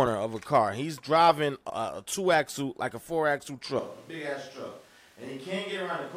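At 1.70 s, just after "driving a", there is a CD skip. A knock or disc flaw sent the laser to another turn of the spiral. Playback mutes for a tiny moment, about 2 ms, with a tick. It resumes from a different place, at "a two axle like".

From 3.79 s, after "like a four axle", the sound suddenly turns roomy and hollow, with less bass. It drops about 10 dB in level. Room noise rises to roughly 25 dB below the speech. This is likely a switch to a distant microphone. It lasts to the end.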